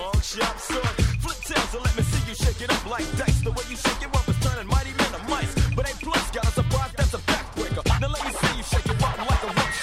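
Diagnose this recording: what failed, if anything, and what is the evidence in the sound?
A dropped buffer (overrun) at 8.85 s is heard as a jump where the sound skips ahead. A few milliseconds were likely overwritten in the driver buffer before being read.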